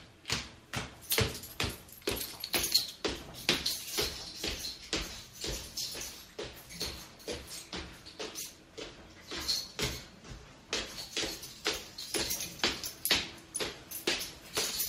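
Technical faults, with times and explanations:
Nothing stood out on listening to this audio.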